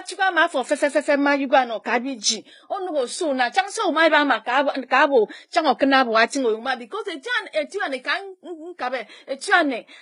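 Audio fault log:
Throughout, transcoding between lossy codecs: the speech carries two layers of coding artefacts heard together. Content reaches up to about 21.6 kHz. The sound likely passed through a low-rate Vorbis encode and then HE-AAC near 24 kbit/s, the second codec re-coding the first's damage.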